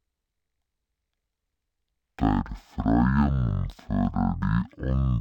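Speech at half speed, an octave low throughout: stereo read as mono, interleaved left and right samples played as one channel, leaving a faint mirrored copy in the spectrogram's upper half.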